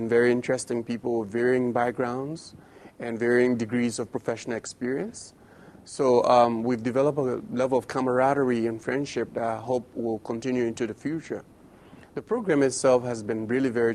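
No technical faults are audible anywhere in the recording.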